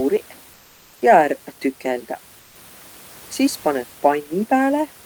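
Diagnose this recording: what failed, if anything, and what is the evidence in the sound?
Comfort noise in place of the background, at the codec stage and likely from Opus DTX: at 0.55–0.99 s and 2.39–2.55 s, the textured room noise becomes a smooth, featureless spectrogram band about 2–3 dB quieter.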